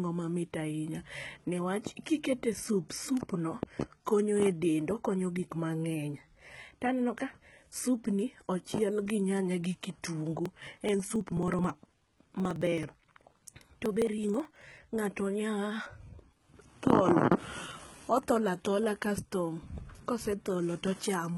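A speech recording whose treble sounds bright but false throughout: the s sounds come out gritty and lispy, with a metallic sheen above the lower voice band, because the upper harmonics no longer sit in line with those below them. Heavy damage of this kind is the likely signature of HE-AAC compression at a very low rate, around 16 kbps in the v2 form, where only the lower spectrum is truly coded and the top is rebuilt by copying lower bands upward under a coarse envelope. From 10.46 s to 14.83 s the sound is also broken by a rapid, evenly spaced ticking, one tick every 0.054 s, or roughly eighteen a second, around seventy in all. Each tick is a jump where about 10 ms of audio has been skipped rather than filled with silence. These are periodic USB or driver dropouts, in which something repeatedly stalls the bus or audio driver on a fixed cycle so that a slice of signal never arrives.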